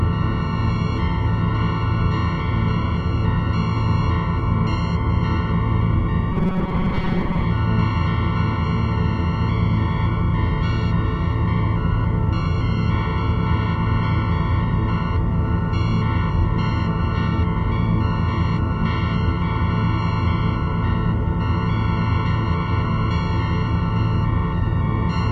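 From 6.32 to 7.45 s the sound turns into a rigid metallic buzz at 188 Hz, robotic sound from repeated short buffers, likely from about 5 ms chunks looping while half the audio is skipped. A spectrogram shows evenly spaced harmonic stripes; the waveform repeats identical cycles.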